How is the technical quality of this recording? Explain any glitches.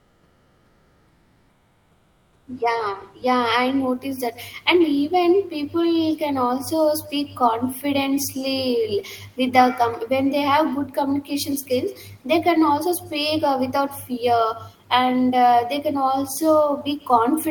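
The recording has two faults: an echo over the whole speech clip and a patch of artificial background at the start.

From 0 to 2.47 s there is comfort noise in place of the background. The real room noise is replaced by a steady, featureless hiss, about 9 dB quieter. The likely cause is discontinuous transmission: the sender stopped sending during silence, and the receiver made up filler noise.

Echo with no canceller runs throughout. Every phrase returns roughly 150 ms later, thinner, about 20 dB below the speech. The far end played the call aloud, its microphone caught it, and nothing removed that copy before it came back.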